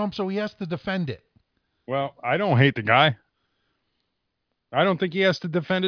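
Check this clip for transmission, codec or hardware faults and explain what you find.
Nothing to flag here: I listened through the speech and didn't hear a single fault anywhere in it.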